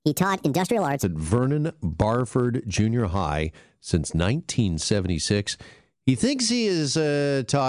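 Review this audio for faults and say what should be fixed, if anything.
Wrong sample rate from 0 to 1.03 s. Speech runs 1.45 times fast, about 6.5 semitones high, which fits 22 kHz audio played at 32 kHz. Resample to the output rate before playback.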